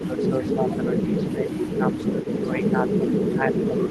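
From 0.0 s to the end at about 3.9 s, the speech is hit by speech suppressed in double talk. The level repeatedly sags, at worst by around 20 dB, and the top end thins, likely because an echo canceller ducked the talker while the far side spoke. On a waveform the envelope shows sudden notches; on a spectrogram, high-frequency energy fades in patches.

Over the same span comes echo leak: a faint delayed copy trailing the speech by 270 ms, in brief scraps at 0.00 to 0.04 s and 0.20 to 0.29 s (about 30 dB down), then longer stretches from 0.47 to 2.43 s and 2.64 to 3.91 s (about 25 dB down). It is likely residual loudspeaker pickup the canceller missed. A spectrogram shows ghost harmonics shifted 270 ms right.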